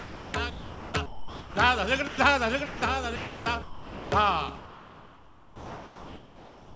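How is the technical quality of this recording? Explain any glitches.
The recording has repeated gaps where the real sound is replaced by steady noise. It passed through a call path with nothing above 8 kHz, which fits G.722 at 64 kbps.

Sound dropped by the voice detector: at 0.00 to 0.34, 0.50 to 0.94, 1.06 to 1.56, 2.08 to 2.18, 2.66 to 2.82, 3.16 to 3.46 and 3.62 to 4.12 seconds, sound gives way to flat noise. The likely cause is a voice detector treating real sound as background and pausing transmission.

Comfort noise in place of the background: from 4.56 seconds to the end, the detailed background becomes featureless synthetic hiss, about 3 dB quieter. The sender has likely stopped sending, and the receiver fills the pause.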